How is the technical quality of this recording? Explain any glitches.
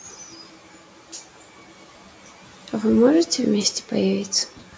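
The main problem is speech cut by the noise suppressor, three times: 0.03 to 2.72 s, 3.81 to 3.91 s, and 4.29 s to the end. The suppressor mistakes parts of the speech for background and pulls them down by about 11 to 12 dB, so syllables sound swallowed and faint against low room noise.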